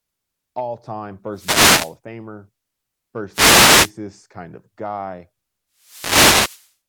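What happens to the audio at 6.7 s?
At 6.7 s the speech is still under a burst of static, the tail of a wireless microphone noise hit that begins at 5.76 s, just after "kind of guy", and clears at 6.75 s. The swish of noise lasts about a second. It comes from the radio link of an analogue FM microphone: reflections of the transmitted signal cancel one another, the signal fades, and the receiver's own noise rises until reception recovers.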